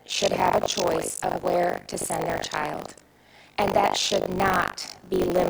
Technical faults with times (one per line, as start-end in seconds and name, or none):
0.00-5.49 buffer tearing